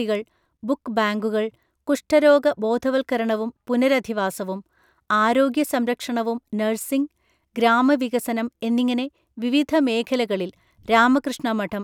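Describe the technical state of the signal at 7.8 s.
At 7.8 s the speech signal is intact, with no audible fault at that point.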